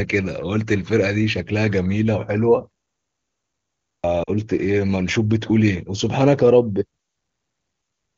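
A clipped start after a pause comes at 3.84 s. After about 1.2 s of silence the output device had gone idle and needed time to wake, so roughly 0.2 s of sound, up to 4.04 s, was swallowed, and the speech begins abruptly without its opening.

Lost AMR speech frames follow at 4.24 to 4.30 s. For about 40 ms, which fits two lost 20 ms frames, the wideband decoder covered the gap by repeating its last good settings at lower gain, so the sound drops to near silence before the voice returns weak or rough for a moment.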